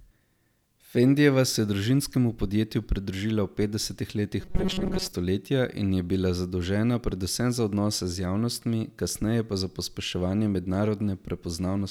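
From 4.41 to 5.13 s, audio likely arrived too seldom, so playback kept looping a buffer of about 5 ms for most of that stretch. The result is robotic sound from repeated short buffers: the speech becomes a rigid metallic buzz at 188 Hz.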